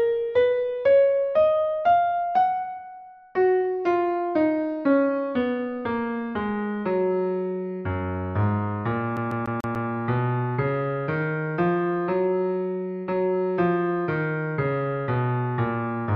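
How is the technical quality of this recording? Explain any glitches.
There is one clear glitch, from 9.17 to 9.90 s. It is a CD stuck on one turn. A short slice of about 145 ms plays five times in a row. Each repeat is cut off by a brief mute. A scratch on the disc makes the laser jump back one track at the same point on each turn. So the player keeps rereading the same spot. The result is a fast, even stutter, the classic sound of a skipping CD.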